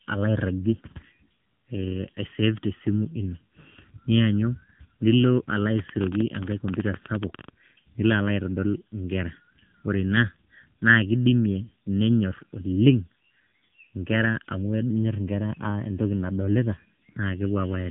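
From the very start and for the whole of the speech, a channel delay (comb filtering) gives a hollow, phasey colour. One channel runs late by under a millisecond, so summing to mono cancels at evenly spaced frequencies, the first near 700 Hz. Unlike plain muffling, these notches stay fixed instead of rolling off the top.

Also present throughout is AMR narrowband mobile codec damage. Nothing passes above about 3.8 kHz, and the voice turns plainly buzzy and synthetic, which points to a low bitrate near 7.4 kbps. That buzz separates it from a simple low-pass filter, which would only dull the sound.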